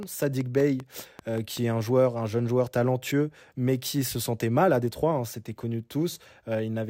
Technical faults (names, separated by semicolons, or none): train of clicks